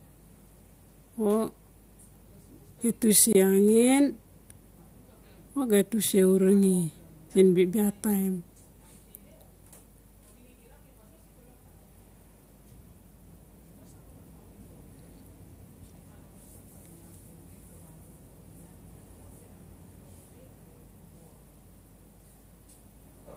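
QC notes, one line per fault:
3.33–3.36 s, corrupt frame muted: the speech drops abruptly into a silent gap of about 34 ms, which points to a single compressed frame damaged by bit errors. The decoder rejected it, the player substituted silence for its duration, and timing carries on unchanged.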